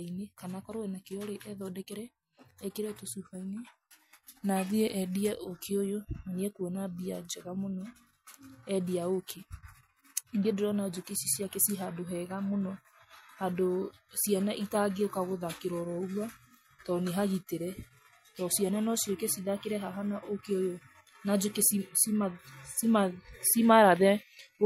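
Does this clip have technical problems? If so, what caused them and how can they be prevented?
No, nothing stood out as a technical problem on listening to this speech recording.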